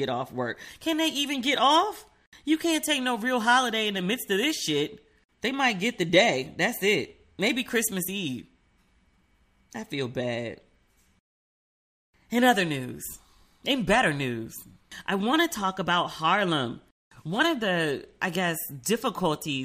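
No technical faults can be heard anywhere in this speech recording. There are no events to place in time, so there is nothing further to describe.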